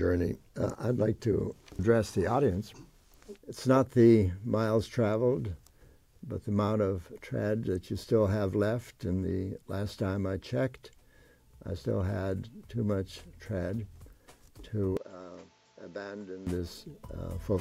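At 14.97 s the sound abruptly turns duller and quieter, about 10 dB down, with a new background noise sitting roughly 30 dB below it, and it clears again at 16.47 s. The likely cause is the input switching to a poorer device, whose narrower band cuts everything above 7.6 kHz. A spectrogram shows the upper region going empty across that stretch with no gap at either switch, while the waveform's envelope visibly shrinks.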